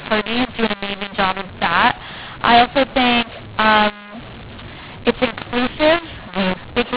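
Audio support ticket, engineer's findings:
Mu-law and A-law mixed up, throughout the clip. Speech harsh and distorted. Levels scrambled: some too loud, others too quiet. Pauses filled with noise. Probable component: G.711 decoder. Mechanism: mu-law bytes expanded on the A-law curve, so each code maps to the wrong level and the quietest codes land well above silence. The underlying G.711 mu-law path runs at 8 kHz sampling, so the band stops at 4 kHz.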